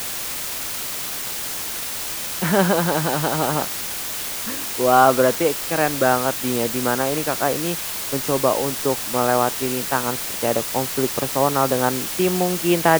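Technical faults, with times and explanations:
Throughout, low bit depth with dither: A loud, even hiss sits under the speech for the whole clip. It sits only about 10 dB below the speech, so it is very prominent. The sound points to very coarse sample values, which fits a 5-bit signal. Random dither was added before each value was rounded. This turns the rounding error into steady white noise. The speech therefore stays clean of distortion but sits over a constant hiss.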